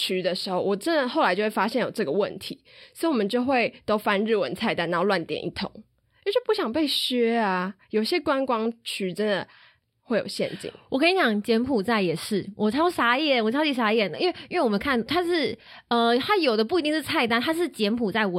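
No technical faults can be heard in the recording of speech. At no point is the sound disturbed.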